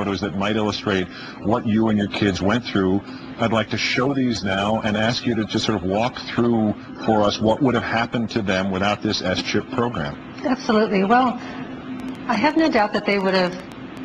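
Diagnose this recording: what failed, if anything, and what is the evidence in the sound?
A train of clicks runs from 12.00 s to 13.98 s: around fifteen sharp, similar-shaped pulses at about 7.6 per second, spaced unevenly, peaking about 5 dB above the surrounding sound. On a spectrogram they appear as thin vertical broadband lines; on the waveform, narrow spikes standing clear of the envelope. The stage is most likely the analogue wiring, with electrical interference from nearby equipment coupling pulses into the signal path.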